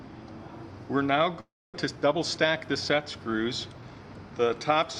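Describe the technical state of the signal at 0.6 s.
At 0.6 s the signal is intact, with no audible technical fault at that moment.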